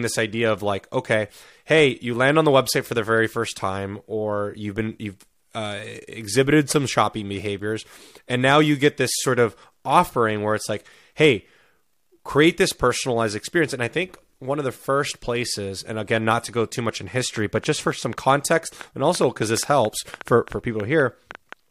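Right after "go too much in", at 17.4 s, a train of clicks starts and runs to 21.5 s: around twenty similar pops at roughly 5.3 per second, unevenly spaced, poking a few dB above the speech. It's likely interference or a faulty connection injecting pulses.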